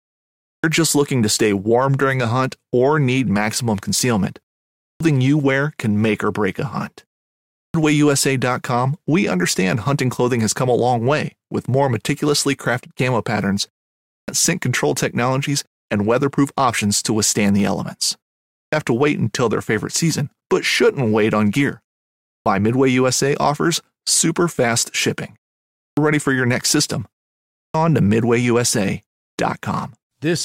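Clipped start after a pause occurs at 0.31, 4.69, 7.46, 13.98, 18.44, 22.15, 25.68 and 27.45 s. Each time, after a gap of only 0.3 to 0.47 s, the output device has dropped into sleep and must wake and relock before it passes audio again, swallowing roughly 0.28 to 0.33 s of speech. Words therefore jump in abruptly, missing their opening sounds, while the pauses themselves fall quietly silent as the output mutes.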